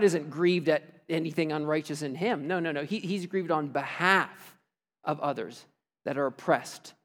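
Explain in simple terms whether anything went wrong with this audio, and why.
Nothing went wrong with this recording, so there is no fault to point to at any moment. The speech comes across steadily, with no dropouts, jumps or unexpected changes along the way.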